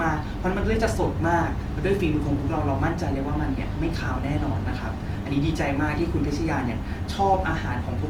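A speech recording with plainly audible coding damage from start to finish. The sound is grainy and rough, with a noisy texture. Bandwidth stays full, up to 20.1 kHz. The likely cause is Opus compression in its music mode, at a rate that points to about 24 kbps. Short of bits, the encoder fills bands with noise.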